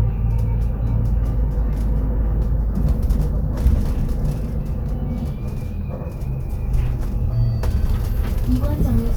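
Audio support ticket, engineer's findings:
No fault found on review of this everyday-sound recording. Nothing audible points to a failing component anywhere in the chain.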